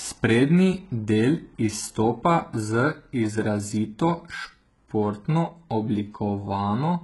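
From start to end, the speech carries heavy codec damage, likely from HE-AAC compression. Only the lower spectrum is coded directly, and the treble is rebuilt by spectral band replication: lower bands are copied upward and given a rough envelope. Nothing reaches above 11.5 kHz. Unlike a plain lowpass or ordinary AAC, treble does extend that high, but its harmonics don't align across the crossover, so s sounds come out gritty, metallic or lispy, consistent with a bitrate around 12 kbps.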